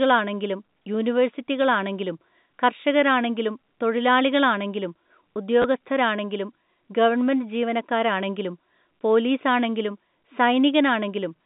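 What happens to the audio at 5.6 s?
Right around 5.62 to 5.64 s there's a bit of packet loss with the last packet repeated. About 20 ms of audio went missing, which fits two 10 ms packets, and the receiver filled the hole by replaying the last good packet. That replay gives a quick robotic stutter, heard through the narrow telephone band of the G.711 line.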